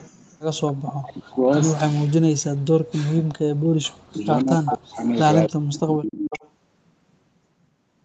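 From 0.79 to 1.37 s the speech is pushed down in level, with the deepest dips reaching around 40 dB. The likely cause is speech suppressed in double talk: with both ends talking, the echo canceller turned down the near talker along with the echo.

From 1.34 to 1.83 s a faint delayed copy of the speech, about 15 dB below it and trailing by 266 ms, comes through. This is likely an echo leak, where loudspeaker sound reached the far-end microphone and was not fully cancelled.

The same suppression returns from 1.89 to 3.4 s, 3.95 to 5.05 s and 5.48 to 6.25 s, chopping and dipping the speech. The echo returns from 4.25 to 5.79 s and 6.23 to 6.5 s, still 266 ms behind and now about 10 dB down.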